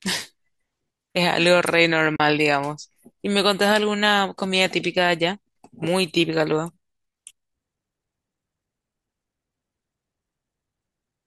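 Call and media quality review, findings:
AAC frame loss with muting, 2.16–2.20 s: the decoder zeroed the spectrum of the missing frames, which fits four lost 10 ms frames of likely low-delay AAC. The result is a soft-edged 40 ms hole in the speech.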